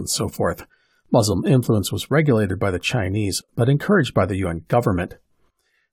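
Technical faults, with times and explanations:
Nothing here needs flagging, as the speech comes across without any technical fault worth noting.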